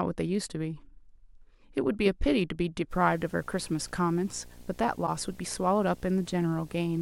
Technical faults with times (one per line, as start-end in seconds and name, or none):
2.91-7.01 video or display buzz
5.06-5.09 broken MP3 bit reservoir